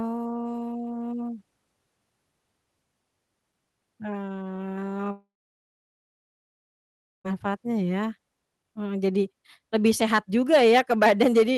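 Speech carried over a call path, band-limited near 12 kHz, which points to Opus at around 20 kbps. From 5.11 to 7.26 s the sound decays into a brief fading buzz, then about 1.96 s of near-silence before resuming with roughly 2.1 s missing, likely a long network dropout where concealment ran out.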